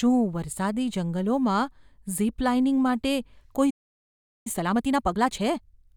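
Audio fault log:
3.70–4.47 s, playback stall: after "ઝિપ લાઇનિંગ માટે" the speech falls silent for about 0.75 s, likely from the player running dry.
4.47–5.87 s, time-compressed catch-up: the speech runs about 1.5 times faster at normal pitch, from small cross-faded cuts, unlike resampled speed-up, which would raise the pitch.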